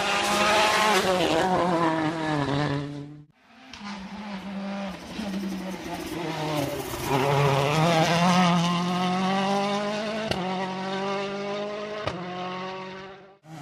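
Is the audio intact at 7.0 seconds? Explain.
Yes, at 7.0 seconds the audio is intact, with no dropout, click, distortion or other fault at that moment.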